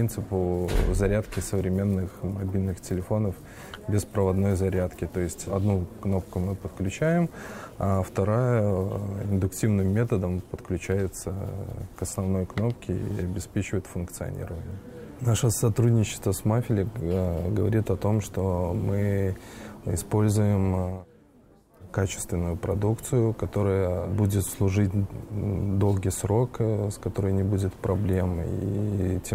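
Nothing stood out as a technical fault on listening to this recording.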